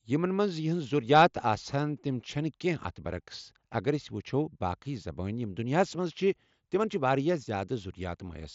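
No technical faults are audible.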